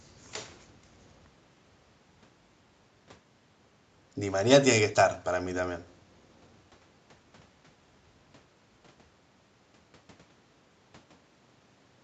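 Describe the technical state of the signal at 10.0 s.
At 10.0 s the speech signal is intact, with no fault present, and its top end stops at around 8 kHz as expected from the call microphone processing and the Opus call path it passed through.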